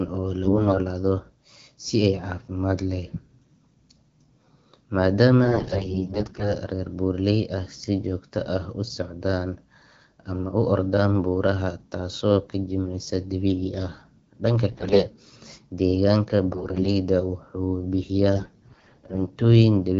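Five bursts of AMR bit errors hit the speech, at 0.43–0.78 s, 5.44–6.54 s, 14.71–15.04 s, 16.48–16.93 s and 18.36–19.19 s. In each, corrupted low-priority frame bits misplace excitation pulses and skew pitch, gain and spectral parameters. Level and pitch hold roughly, but the voice turns hoarse and gargly, harshest near 14.7 s. Spectrograms show smeared, noisy harmonics and broken formants, and the waveform looks ragged inside a normal envelope. Between bursts, the light AMR-WB coding sounds clear, consistent with about 12.65 kbit/s.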